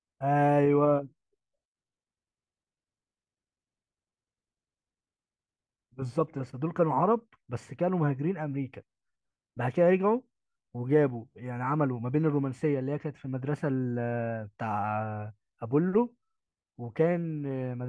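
No audible faults turn up anywhere in this recording.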